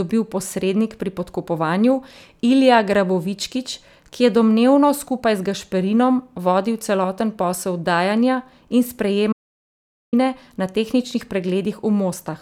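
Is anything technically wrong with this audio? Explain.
Yes. From 9.33 to 10.13 s there is an audio dropout to silence: the speech cuts off mid-flow, leaving 0.8 s of dead silence before "na tehničnih". The input was likely lost while recording continued. Unlike a natural pause, no room tone remains.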